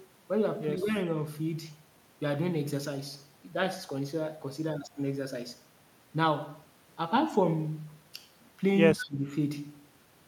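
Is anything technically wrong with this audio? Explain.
Yes. Speech suppressed in double talk occurs at 0.82–0.95 s as a slight dip and at 8.94–9.3 s as a deeper drop of roughly 15 dB. The likely cause is an echo canceller attenuating the near talker while the far side also spoke. Echo leak appears at 9.0–9.09 s: a brief copy of the speech returns 155 ms late, about 15 dB below it, likely residue that a loudspeaker-side echo canceller failed to remove.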